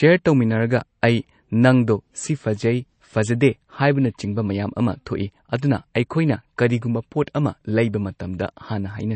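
MP3 compression damage runs throughout this speech, with nothing above 8.3 kHz and watery, swirling artefacts, likely from an encoder starved of bits, which fits a bitrate around 32 kbps.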